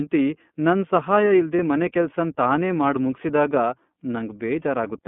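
The iLBC codec runs through the whole clip. The speech passes through a narrow line band of roughly 150 Hz to 3.5 kHz, so everything above that is missing and the voice sounds boxed-in. Each 30 ms block of excitation is coded on its own, which gives the speech a plainly audible rough, slightly synthetic grain. The coding rate of about 13.3 kbps points to iLBC's 30 ms mode.

Lost iLBC frames occur at 1.56 to 1.60 s, a 30 ms gap that fits a single lost frame. The decoder filled the hole by repeating the last pitch cycle blended with noise, so the dropout sounds like a brief held, faintly buzzy vowel rather than silence. Because iLBC frames don't depend on one another, the speech snaps back to normal immediately afterwards.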